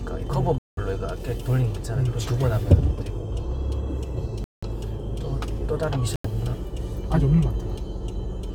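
A likely Bluetooth stall, with radio interference holding up packets until the headphones' buffer emptied, interrupts the sound three times. Each time, playback drops to complete silence and then carries on. The first gap runs from 0.58 to 0.79 s, with about 190 ms of silence. The second spans 4.44 to 4.64 s, silent for about 184 ms. The third, from 6.16 to 6.26 s, is shorter at about 87 ms.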